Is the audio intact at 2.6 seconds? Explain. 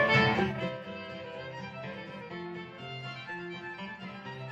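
Yes, the audio is intact at 2.6 seconds, with no fault at that moment.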